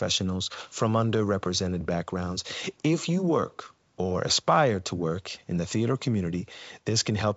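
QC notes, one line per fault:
Nothing to flag here; it's ordinary G.722 wideband telephone audio at 64 kbit/s, with content reaching up to about 7.7 kHz and no more than a faint trace of coding hiss.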